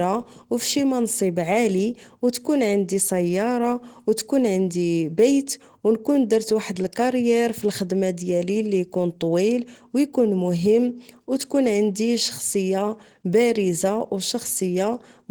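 A speech recording carries Opus compression damage that is plainly audible for its whole length. The voice sounds muffled and hoarse, and the texture is grainy and rough rather than the swirling, watery holes MP3 leaves, since the missing detail is filled with noise instead of dropped. The top end still reaches about 20.2 kHz, so bandwidth is not narrowed. The likely cause is Opus in its hybrid speech mode at a rate that fits roughly 16 kbps.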